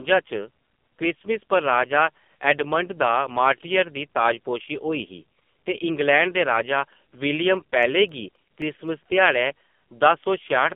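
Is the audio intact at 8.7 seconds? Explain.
No. 8.7 s falls inside a run of CD scratch ticks from 7.57 to 8.88 s: six short ticks, the longest only about a couple of milliseconds. A scratch destroys more data than error correction can rebuild, once per turn of the disc, so the player fills or mutes those samples and each repetition leaves a brief tick. They come at a steady, rotation-driven spacing and form a short cluster. Random crackle or isolated digital clicks would fall irregularly instead.

The moment also carries the AMR narrowband mobile codec damage that runs through the whole clip. The speech is confined to roughly 200 Hz to 3.5 kHz, with nothing above 3.5 kHz. The codec models the vocal tract and excites it with a few pulses per subframe. The heavy buzzy, synthetic texture points to a low mode of around 5.9 kbps. A plain low-pass filter would dull the highs without that artificial buzz.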